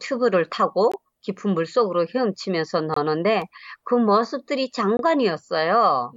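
A speech clip with a gap between stream segments, heard as hard-edged dropouts at 0.92 s (about 20 ms), 2.94–2.97 s (about 23 ms) and 4.97–4.99 s (about 22 ms), repeating every 2.0 s. Consecutive segment timestamps don't quite meet, so the player pads the hole with silence and nothing is lost. On a waveform each gap is a flat line with abrupt edges, and on a spectrogram it is a narrow blank vertical stripe.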